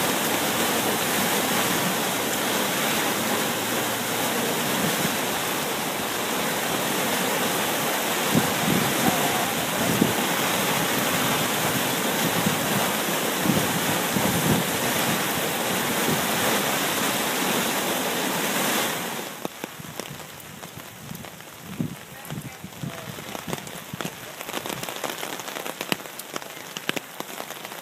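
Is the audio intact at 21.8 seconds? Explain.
Yes, at 21.8 seconds the audio is intact, with no dropout, click, distortion or other fault audible at that moment.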